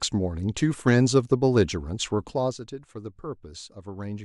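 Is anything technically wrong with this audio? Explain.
Yes. From 2.2 to 2.68 s there is zipper noise: a fine ticking or zipping texture rides on the speech as its level falls by around 10 dB. The level is being changed in discrete jumps, around 50 a second, rather than as a continuous glide. Each jump puts a small discontinuity in the waveform, heard as a tiny click, and the rapid run of clicks merges into that zipping sound for as long as the level is moving.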